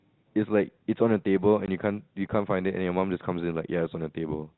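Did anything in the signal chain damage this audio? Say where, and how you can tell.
Yes, at the network stage: packet loss filled with silence leaves a 20 ms hard-edged hole from 1.66 to 1.68 s, which fits one dropped G.711 packet replaced by silence.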